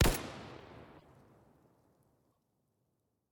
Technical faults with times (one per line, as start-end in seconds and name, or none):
0.98-1.05 broken MP3 bit reservoir
2.31-2.37 broken MP3 bit reservoir